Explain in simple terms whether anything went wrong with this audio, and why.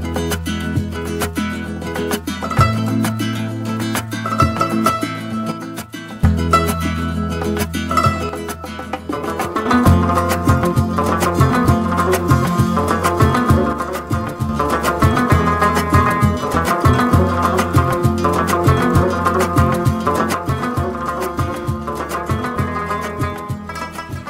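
Something did go wrong. Four times, the sound suddenly gets quieter; the first three times it then jumps back. This happens from 5.52 to 6.24 seconds, 8.29 to 9.65, and 13.73 to 14.49. The last one starts at 20.34 and lasts to the end. The likely cause is one channel drops out. One side of the stereo signal goes silent, so only half the sound reaches you.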